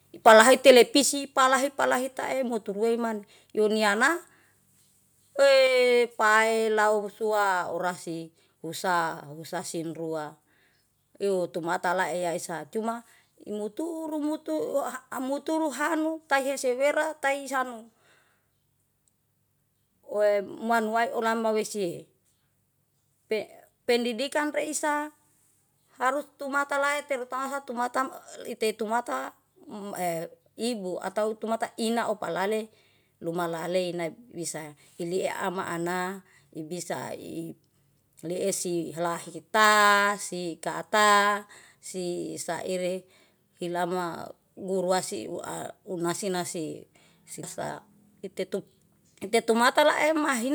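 A speech clip with a harsh crackle on its loudest syllables from 0.27 to 0.71 s, where roughly one percent of samples are flattened about 3 dB past the converter's limit. That points to likely microphone overload, distinct from codec distortion by its hard-edged crackle. At 1.02 s and 5.67 s, voice and background drop together, instantly, by about 5 dB and then about 4 dB, likely the microphone volume stepped down; unlike a gradual automatic-gain fade, each change is abrupt.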